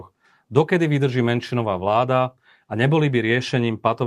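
No technical faults can be heard anywhere in this speech recording.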